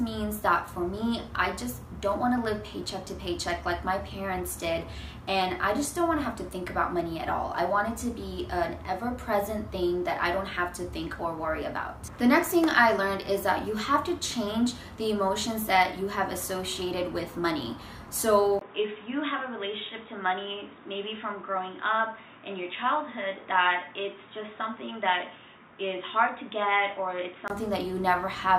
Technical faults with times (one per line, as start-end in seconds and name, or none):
18.59-27.50 input switched to a poorer device